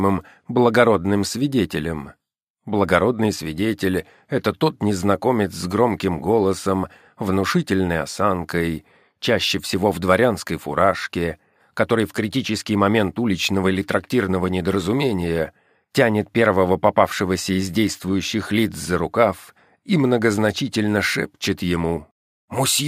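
Nothing in the signal stands out as a technical fault: the level, continuity and timing of the audio hold steady from its opening moment to its last.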